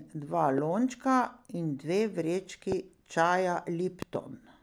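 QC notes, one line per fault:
0.58–0.60 s and 2.72–2.74 s, loud pop: a single sharp pop each time, roughly 15 dB above the speech, which carries on underneath. Likely a brief voltage spike from a switch, plug or static landing on the signal.
4.02–4.17 s, loud pop: a double pop this time, two quick hits about 10 dB over the speech, and again the talking continues through it. Probably the same sort of electrical glitch firing twice in a row.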